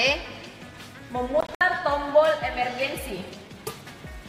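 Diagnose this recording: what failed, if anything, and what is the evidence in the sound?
From 1.41 to 1.61 s the sound cuts out in several gaps, the longest 61 ms, then resumes further along: likely a Bluetooth dropout at playback.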